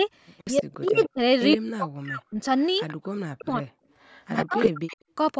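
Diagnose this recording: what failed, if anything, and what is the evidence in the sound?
A delayed copy of the speech trails it at 0.38–1.05, 1.51–1.57, 2.59–3.07 and 4.01–4.97 s, 117 ms behind, and 76 ms behind in the last stretch, where it nearly matches the speech. This is an echo leak in call processing, likely a loudspeaker echo the echo canceller missed.

The speech itself sinks by around 40 dB at 0.62–1.19, 1.55–2.39, 3.26–3.79 and 4.49–4.83 s, three of them overlapping an echo stretch. This is speech suppressed in double talk: the canceller, likely unable to separate talker from echo, turned both down.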